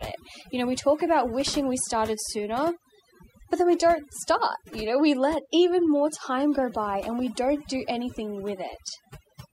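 Overdone noise removal runs through the whole recording. The noise reduction was set far too hard. Frequency bands near the noise level are pushed down or cut out, taking quiet parts of the speech too. Gaps fall to near silence with twinkling specks.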